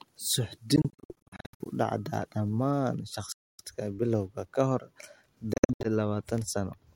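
In this speech, gaps break the sound at 0.76–1.67 s (about 0.52 s lost in runs up to 70 ms), 3.32–3.63 s, and 5.53–5.87 s. Each is likely a Bluetooth dropout, showing as blank columns on a spectrogram and flat waveform, with speech resuming as if it had continued.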